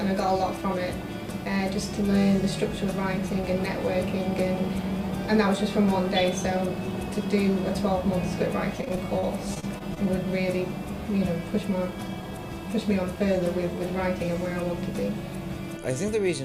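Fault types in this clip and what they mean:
Repeated packet loss (robotic sound): From 8.81 to 10.07 s, nine gaps hit in quick succession, the longest about 36 ms. Each is patched by stretching the previous sound, so about 14% of that stretch is filled-in audio. It turns choppy, with small pieces missing.
Jitter buffer speed-up: From 12.15 to 12.39 s, the receiver trims short pitch-period slices to shrink an overfull buffer. Roughly 40 ms is removed. The sound plays at about 115% speed with pitch unchanged, so it briefly feels rushed.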